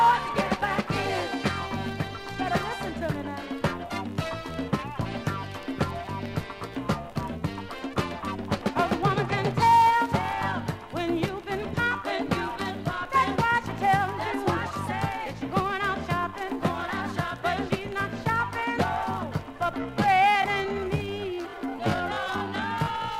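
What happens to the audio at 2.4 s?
Nothing goes wrong at 2.4 s; the audio plays through that moment intact, with no dropout, click or distortion.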